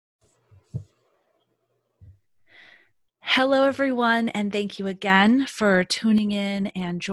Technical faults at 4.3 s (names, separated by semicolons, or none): one channel drops out